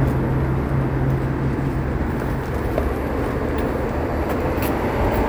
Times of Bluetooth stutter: none

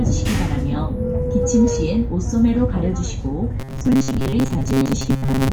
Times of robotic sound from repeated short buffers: 3.60-5.52

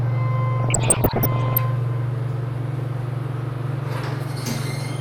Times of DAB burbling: 0.60-1.59

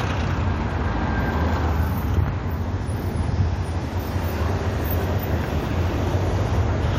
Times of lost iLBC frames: none

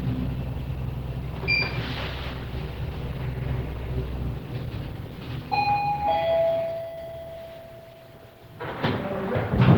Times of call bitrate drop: none

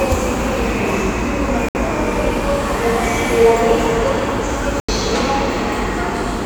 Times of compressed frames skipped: none

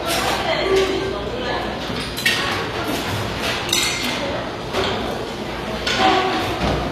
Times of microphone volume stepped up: none

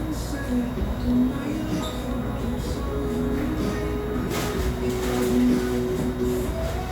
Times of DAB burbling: none

